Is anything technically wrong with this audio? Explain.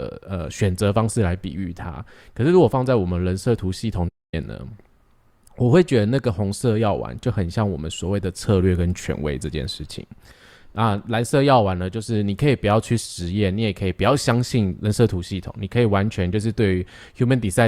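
Yes. From 4.08 to 4.34 s there's AAC frame loss with muting. The decoder zeroed the missing frames, so the speech fades softly into a 0.26 s silent gap.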